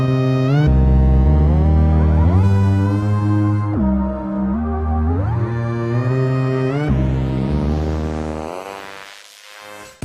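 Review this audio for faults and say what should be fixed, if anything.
Nothing here needs fixing, as the signal shows no technical faults anywhere in the recording.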